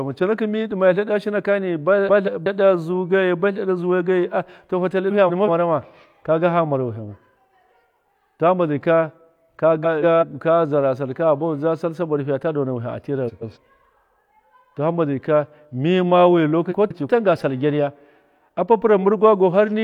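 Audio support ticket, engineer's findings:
Frames out of order at 2.08–2.47 s (before "zuu geyi ba tleɗa"), 5.10–5.48 s (before "mara ma kaga hama"), 9.83–10.24 s (before "ka zara sall"), 13.27–13.57 s and 16.71–17.09 s. Garbled flutter. Probable component: receive buffer or packet reordering. Two adjacent blocks of about 186 ms swapped (about 139 ms at 13.27 s), fitting runs of four frames (three at 13.27 s). Speech plays halves exchanged. No time lost.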